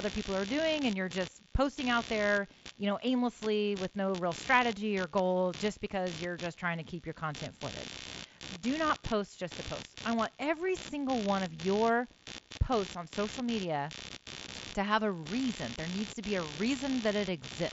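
Speech recorded through a Bluetooth headset, with the mSBC codec limiting it to wideband. Computer activity noise runs under the whole clip. It is a buzzy, pulsing chirp repeating around 70 times a second, sitting roughly 15 dB below the speech. It tracks the machine's load, not the talker, as processor or graphics activity disturbs the shared audio ground. From 8.88 to 8.90 s there is concealed Bluetooth headset packet loss. About 22.5 ms of audio went missing, which fits three dropped frames. The receiver filled the gap by repeating recent waveform, leaving a brief buzzy smear and a slight warble as real speech resumes.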